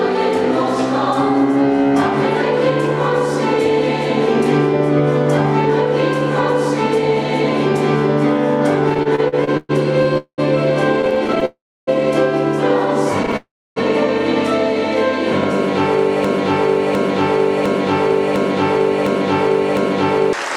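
From 8.89 to 11.43 s the sound drags in repeated stalls (stutter): 19 brief gaps, the longest 118 ms, where the jitter buffer ran dry and the receiver stretched the last sound. Nothing is lost, but on a spectrogram the frames smear into short horizontal streaks.

Inside that stretch, at 10.18 to 10.40 s, comes a call audio freeze. The audio holds for about 0.2 s, 90 ms of it silent, before resuming where it stopped. The likely cause is packets held up in transit. A second freeze at 11.45 to 11.89 s lasts about 0.42 s, with 300 ms of silence. In the waveform each shows a decaying sustained tail followed by a flat gap, with no content missing afterward.

A short stutter of three tiny gaps at 13.23 to 13.34 s leads straight into another freeze at 13.36 to 13.78 s, about 0.4 s long with 290 ms silent.

From 16.25 to 20.33 s a broken-record loop repeats one 0.71 s fragment back to back six times, likely from a stalled player or stream resending its last buffer. 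The audio meant for those seconds is gone. A spectrogram shows identical blocks tiled side by side, and the waveform repeats the same shape exactly.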